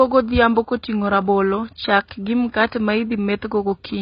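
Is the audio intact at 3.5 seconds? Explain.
No. At 3.5 s the speech carries the same damage heard throughout the clip, and it is likely AAC compression. Nothing is left above 5.1 kHz, so the speech sounds dull and muffled. The coding is heavy, which fits a very low bitrate of about 16 kbps. With so few bits, the encoder drops the top band and coarsely quantises what remains. That leaves a smeared, warbling texture, with fizzy sibilants.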